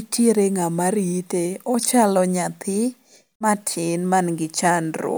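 Listening to the speech, nothing stood out as a technical problem at any point.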